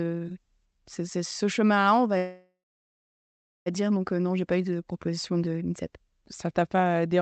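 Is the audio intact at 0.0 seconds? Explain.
Yes, the speech is intact at 0.0 seconds, with no dropout, glitch or other fault at that point.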